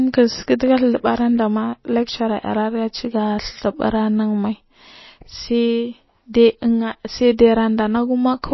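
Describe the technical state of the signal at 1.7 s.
At 1.7 s, as throughout, the speech shows likely MP3 compression at a low bitrate, fitting roughly 24 kbps: nothing above 5.8 kHz, with watery, swirling artefacts plainly audible.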